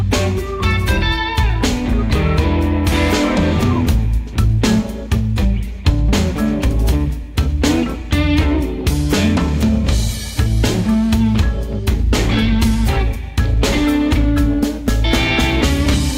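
No technical faults are audible.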